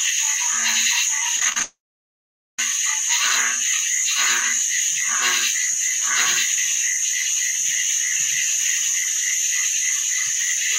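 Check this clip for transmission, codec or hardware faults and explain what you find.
Two transmission faults are audible, back to back early in the clip.

From 1.36 to 1.61 s there is repeated packet loss (robotic sound). Six short gaps, the longest 33 ms, open in the stream, and each is patched by extending the preceding sound. About 40% of this quarter-second is concealment, with roughly 90 ms of real audio lost. The result is choppy and robotic. Because the holes are brief and quickly followed by genuine audio, this is intermittent loss rather than a single long outage.

From 1.62 to 2.59 s the audio stops arriving for nearly a full second, about 960 ms, most likely a long network dropout. The receiver briefly continues the last sound, which fades, leaving about 0.83 s of silence before the audio resumes without the missing part. Unlike the robotic stretch just before it, this is one continuous gap with no real audio returning in between, so it is heard as a clear break rather than a stutter.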